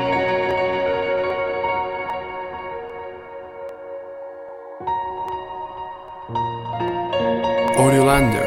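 From 0.51 s to 7.68 s, a short click recurs about every 0.80 s, roughly ten in all. These are clock drift buffer slips. Two clocks likely disagree by around 500 ppm. The buffer overruns or starves, dropping or repeating some fifteen samples each time.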